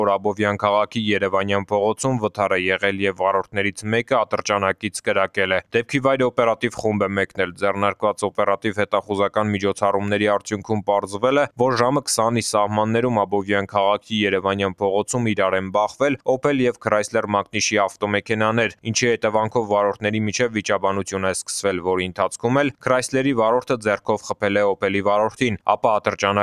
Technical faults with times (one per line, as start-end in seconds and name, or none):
0.00-26.42 noise suppressor applied to music or sounds
5.62-5.91 sound cut by the noise suppressor
7.27-7.62 sound cut by the noise suppressor
18.70-18.87 sound cut by the noise suppressor